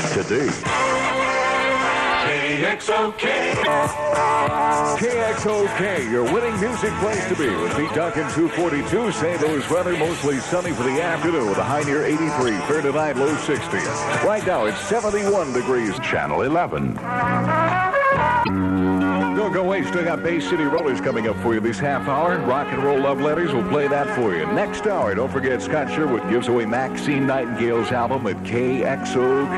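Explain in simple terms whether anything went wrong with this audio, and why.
Four short glitches show up, all the same problem: damaged data in a compressed stream. They land at 3.59–3.68 s, 7.88–7.91 s, 18.41–18.49 s and 20.78–20.80 s, each a quick chirp or blip under a tenth of a second. Some of the compressed file's bytes were garbled, so the decoder couldn't read those bits properly, briefly lost its place, and produced nonsense sound until it found the next clean chunk to lock back onto.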